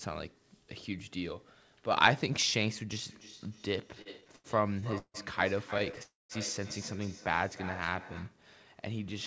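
From 3.04 s to 8.42 s, feedback echo between two devices: a second device replays this audio into the microphone, and each sound returns roughly every third of a second at up to about 13 dB below the speech.

Between 3.95 s and 5.17 s, late packets repeatedly drained the jitter buffer, causing repeated stalls (stutter). Ten gaps, the longest 0.16 s, were stretched over, so the speech drags and stutters. A shorter burst from 5.74 s to 6.00 s brings five brief stalls.

At 6.03 s to 6.32 s there is a call audio freeze, likely from packets held up in transit. The last sound is extended and then goes silent for about 0.19 s before continuing.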